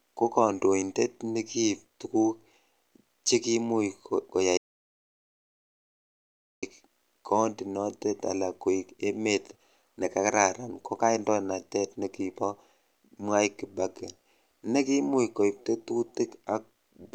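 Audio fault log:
4.57–6.63 s, audio dropout to silence: the input feed was likely lost, through a disconnect or stray mute, while recording carried on writing silence. The speech cuts off abruptly into 2.05 s of silence, without even room tone, then resumes mid-flow.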